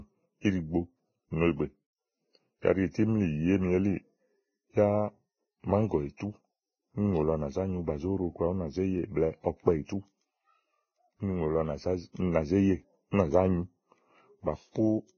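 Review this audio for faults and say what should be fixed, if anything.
Throughout the speech the treble sounds hissy and grainy. Nothing is present above about 6.5 kHz, consonant attacks are smeared, and sustained tones have a rough, noisy texture. The likely cause is heavy Vorbis compression. At a very low quality setting, consistent with a bitrate near 15 kbps, the encoder lowered its cut-off and quantised the remaining high-frequency detail so coarsely that it was replaced by noise of similar energy. Encoding at a substantially higher Vorbis quality setting, or working from the uncompressed source, would prevent this.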